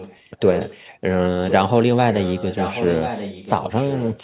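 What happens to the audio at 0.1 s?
At 0.1 s an echo leak is likely at work: a far-end loudspeaker's echo canceller failed to remove its microphone pickup, sending the speech back. From 0.0 to 0.83 s a delayed copy trails by about 1.04 s, roughly 10 dB quieter.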